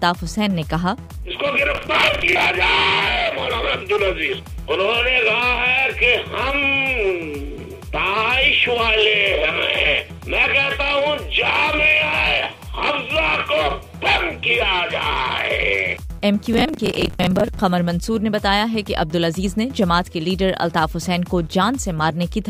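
Processor overload crackle appears from 1.75 to 2.45 s and again from 16.53 to 17.59 s. In both bursts the processor falls behind and misses a long run of buffer deadlines, several dozen each time, with each miss replaying a short fragment of old audio that has hard edges. The repeating grain suggests buffers of around 10 ms. The result is a gritty, tearing crackle over the sound that stops once the load clears.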